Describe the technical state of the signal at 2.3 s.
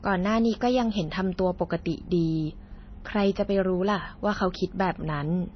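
MP3 compression is audible at 2.3 s, as it is across the whole clip. The damage is plainly audible and likely comes from a low-rate MP3 encode, which fits a bitrate around 24 kbps. Short of bits, the encoder has cut everything above 6.1 kHz, so the speech loses its top-end air and crispness. Weak frequency components drop in and out between frames, which gives the sound a watery, swirling texture.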